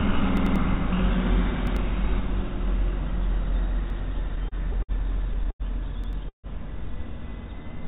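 A recording of everyday sounds, heard through a narrowband call path with nothing above 4 kHz, consistent with a G.711 A-law link. It has four kinds of playback fault. The first is a repeated buffer at 0.37 to 0.56 s, 1.67 to 1.77 s, 3.90 to 3.99 s and 6.04 to 6.13 s. Each time, a chunk of about 93 ms plays again with a hard join, which is consistent with a 4096-sample buffer. The device reused its last block because fresh audio was late. The first event repeats the block twice and loses roughly 200 ms of sound. The others repeat it once and lose about 100 ms each. From 4.19 to 4.92 s there are repeated stalls (stutter). Packets arrived more slowly than they played out, and the jitter buffer drained six times. Each time the receiver extended the preceding sound to cover the gap. Those gaps add up to 125 ms, about a sixth of the stretch, and the longest is 60 ms. Nothing is dropped, but the passage drags and hitches. 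At 5.51 to 5.63 s a short stall from a late packet holds one sound for about 90 ms. The arrival delay jumped by that amount, and the receiver stretched the last audio until the packet came in, then resumed exactly where it left off. From 6.29 to 6.47 s comes a call audio freeze. The last sound continues as a fading fill and then drops to silence for about 120 ms, with 150 ms of concealment in total. The likely cause is packets held up in transit, a 150 ms delay jump that emptied the jitter buffer. Playback then picks up from the point where it stopped, so no sound is lost.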